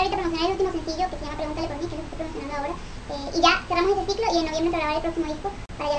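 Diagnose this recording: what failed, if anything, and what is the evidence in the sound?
Playback stage: a wrong sample rate, throughout. Everything runs 1.5 times fast and about 7 semitones high, which fits 16 kHz material played at 24 kHz without conversion.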